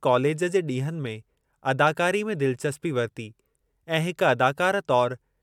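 Speech with no audible faults.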